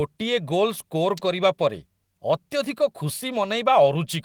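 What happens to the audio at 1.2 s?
An electrical switching spike lands at about 1.18 s: a sharp snap lasting roughly 11 ms, sitting on top of the speech. It is likely a brief arc from a nearby switch, motor or static discharge, picked up by the audio line.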